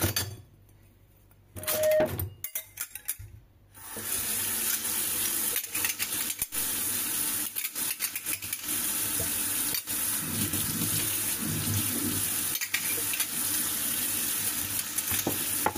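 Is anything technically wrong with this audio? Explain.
Yes. A loudspeaker feedback squeal runs from 1.57 to 2.09 s. A microphone picked up its own loudspeaker, and at 620 Hz the loop gain exceeded one. That tone swells over about a third of a second into a squeal roughly 10 dB above the surrounding audio.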